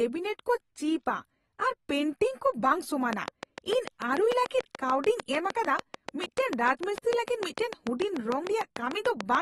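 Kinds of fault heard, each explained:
AAC compression: The speech has a dull, smeared quality with a warbling, fizzy texture on sustained sounds and sibilants, and nothing is present above about 12.4 kHz. This is likely low-bitrate AAC-LC coding, around 37 kbps. At that rate the encoder quantises its spectral lines coarsely against a hearing model, pulls the bandwidth down and leaves gaps or noise-filled bands in the spectrum. The codec damage is plainly audible throughout the clip.
Train of clicks: From 3.13 s to 9.36 s a steady run of near-identical clicks sits over the speech at about 6.75 per second, roughly forty in all, evenly spaced. They peak at about 15 dB above the signal, so they tick clearly through the speech and through the pauses. A regular pulse train of this kind likely comes from interference from nearby equipment or a faulty connection or power supply.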